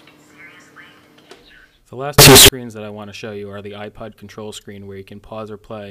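From 2.2 to 2.5 s, the 16-bit samples were likely read with signed and unsigned mixed up, flipping the top bit so each zero crossing leaps across the full range. The audio turns into very loud, harsh distortion, with quiet moments blasting as loudly as everything else.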